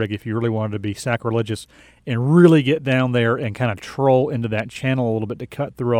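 Nothing in this bit of speech trips the ear as a technical fault, so there's nothing here to flag.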